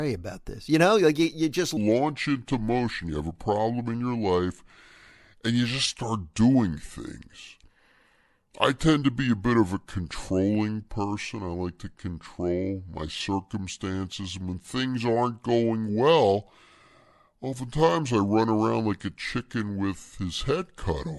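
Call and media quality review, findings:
Wrong sample rate from 1.77 s to the end, right after "like you you just". The speech drops to 0.726x speed and about 5.5 semitones lower, so it's slow and deep. That fits 44.1 kHz audio played out at 32 kHz with no conversion, probably a playback clock or config mismatch.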